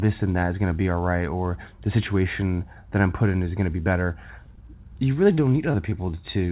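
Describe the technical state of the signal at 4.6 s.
Right after "going to be better", a short concealed packet loss runs from 4.46 to 4.62 s. About 20 ms of the call never reached the decoder in time, and the receiver patched the gap by extending the preceding sound, carrying its pitch forward if it was voiced or substituting shaped noise if not, before crossfading back to real audio. The result is a brief smear or wobble, and a short consonant there can drop out entirely.

Inside that same stretch, from 4.55 to 4.59 s, there is also a short stall from a late packet. The jitter buffer ran dry when a packet was due, so the receiver held the current sound for about 20 ms until the packet arrived, then resumed where it had left off. Nothing further is lost, but the sound lingers slightly too long, with a faint buzz or dip, and everything after it lands about 20 ms later. The call path's 4 kHz upper limit is audible throughout as a narrowband, telephone-like tone.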